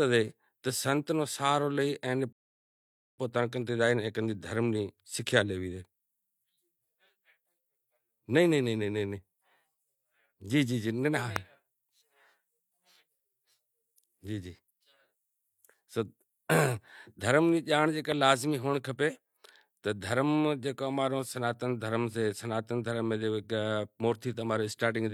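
A speech recording with two kinds of fault. At 2.33 s the audio stops dead and falls silent. It picks up again at 3.18 s, exactly where it left off. This is a rebuffering stall. The player ran short of downloaded data and waited for more to arrive. Nothing is skipped. The gap simply adds about 0.86 s to the clip's running time. Later there are two loud pops, each a single sharp click on top of the speech. The first runs from 11.36 to 11.38 s and peaks about 20 dB above the speech. The second, from 18.12 to 18.14 s, is about 15 dB above it. The speech carries on underneath both. Each is a brief voltage spike added to the signal, likely from a switch, a plug contact, static discharge or a driver glitch.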